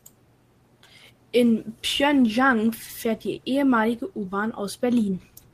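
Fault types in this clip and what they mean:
No faults in this clip.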